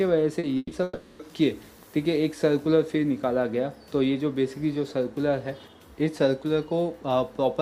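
At 0.39 to 0.45 s there is a short concealed packet loss. About 40 ms of audio failed to arrive in time, and the decoder bridged the hole by extending the preceding sound before blending back into the real signal. It is heard as a brief smear or wobble rather than a gap. What separates it from the later events is its brevity: the patch is too short to fade, so nothing sounds held or dying away.

From 0.57 to 0.73 s comes a burst of packet loss. Roughly 140 ms never reached the decoder, and the receiver stretched the last sound across the gap while turning it down. It ends in about 20 ms of near-silence before the audio resumes further on, with the intervening material gone. Unlike the single short patch, the concealment lasts long enough to be heard as a held, decaying buzz or hiss, and the fade completes.

Between 0.83 and 1.21 s the sound is replaced by 360 ms of continued, repeating texture that carries through the whole stretch without dropping to silence. 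The audio then picks up later, missing everything in between. This is likely a long network dropout. It differs from the burst in length, nearly three times as long, and in never reaching silence, so the fill is heard as one drawn-out artificial tail rather than a quick fade.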